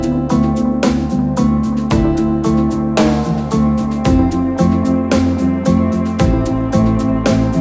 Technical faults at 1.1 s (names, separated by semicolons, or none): none